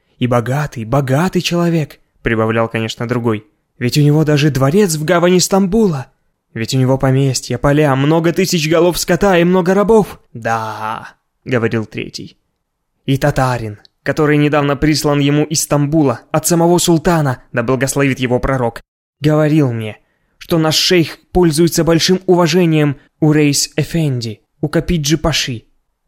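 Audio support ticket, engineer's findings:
Clock slip clicks, 0.18 s to 26.06 s. Faint regular ticks at around ten per second, a few hundred in all, clearest on loud sustained passages and absent in silence. Likely cause is two devices running on independent, unsynchronised clocks, drifting apart by roughly 200 ppm. Each slip drops or repeats a single sample once the offset reaches one whole sample.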